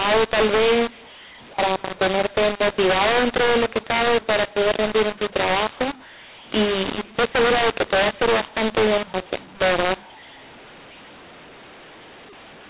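From start to finish the speech carries a mu-law and A-law mix-up: samples coded with A-law are being expanded with the mu-law curve, so every level is mapped onto the wrong step. Loud parts come out harsh and gritty, while the quietest samples are pushed well above silence, filling pauses with hiss. Unlike ordinary clipping, the distortion reaches quiet stretches too, sitting over a telephone band that stops at 4 kHz.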